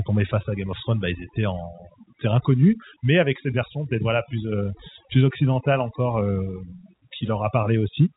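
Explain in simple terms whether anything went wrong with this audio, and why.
Overdone noise removal affects the whole clip, from the start to the end at about 8 s. The background is pushed to near silence with twinkling specks, and quieter parts of the speech are stripped away along with the noise. The telephone line also removes the top of the sound, but it does so evenly and steadily, while this damage flickers.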